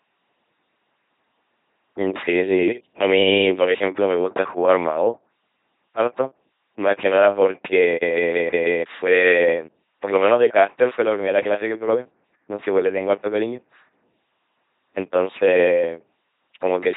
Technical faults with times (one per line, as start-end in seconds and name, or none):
0.00-16.96 LPC-10 vocoder